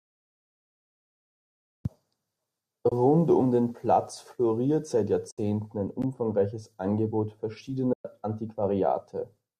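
Three dropouts from AAC frame loss with muting, at 2.89 s before "um den" (30 ms), 5.31 s between "floriert seit" and "ein umfangreiches" (70 ms), and 7.93 s (120 ms): zeroed frames leave soft-faded holes that show as blank vertical spectrogram bands and tapered waveform gaps, in speech that was likely coded with low-delay AAC.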